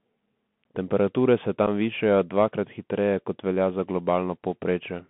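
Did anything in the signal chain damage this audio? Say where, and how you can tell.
Yes. At the codec stage, the whole clip of speech runs through a Bluetooth CVSD headset codec: the band stops near 3.5 kHz with little below 150 Hz, sibilants come out scratchy, and a grainy hiss sits under the voice. That granular, slope-limited roughness is what separates this one-bit delta coding from the smoother band-limiting of a plain narrowband telephone codec. The 64 kbps link trades fidelity for simplicity, and the damage here is plainly audible.

On the wireless link, unconcealed Bluetooth headset packet loss punches a hole at 1.67 s, just before "višajo dvakrat". About 7.5 ms of audio drops out with hard edges, which fits roughly two headset packets lost, and nothing fills the gap. Network jitter stretching would smear the timing instead. Here the speech simply stops and restarts, briefly quieter as the CVSD step size rebuilds.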